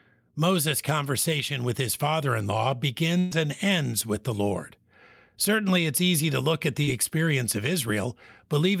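Speech with two network dropouts. A burst of packet loss at 3.19 to 3.33 s, after "his father in law", fills about 120 ms with a fading continuation before jumping ahead to "and ends with the", so audio is lost. The short concealed packet loss at 6.83 s, after "easy to look at", is only about 40 ms and blends back quickly, heard as a brief smear rather than a held, decaying sound before "experience of".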